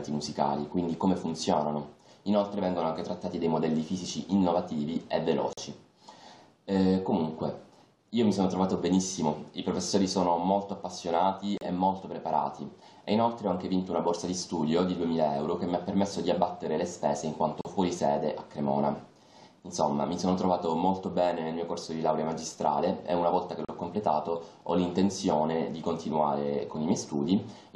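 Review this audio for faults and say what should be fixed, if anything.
Gaps at a join of encoded pieces occur at 5.53 s (45 ms) and 11.58, 17.61 and 23.65 s (37 ms each), every 6 s. Separately encoded segments kept their encoder delay and end padding, so continuous sound briefly drops out. Waveforms show flat silent stretches with smeared edges, and spectrograms show narrow empty vertical bands across all frequencies. Trim encoder delay and padding when joining segments, or encode the full program in one pass.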